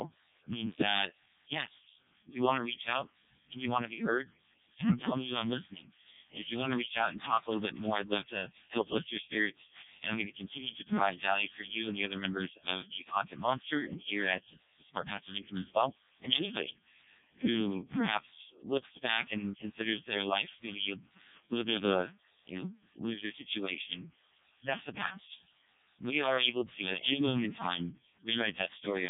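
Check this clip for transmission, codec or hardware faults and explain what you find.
The speech passes through a Codec 2 vocoder for the whole clip, and the damage is heavy. There is no real energy above 3.7 kHz. The coarseness fits Codec 2's lowest mode, around 0.7 kbit/s. At that rate the decoder keeps no waveform. It rebuilds the voice from sine waves using only pitch, voicing, energy and a rough spectral envelope. The result is robotic, buzzy speech with a dull, band-limited top end.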